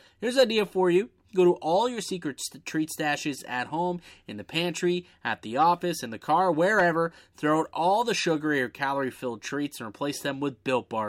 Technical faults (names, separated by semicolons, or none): none